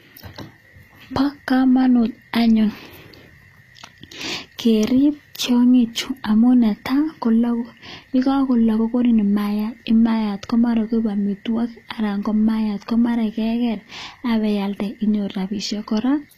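Throughout the speech the treble sounds synthetic and lispy, with nothing above 14.9 kHz. That is likely HE-AAC compression at a low bitrate near 24 kbps, whose copied-up treble, unlike plain lowpassing, stays bright but misaligned.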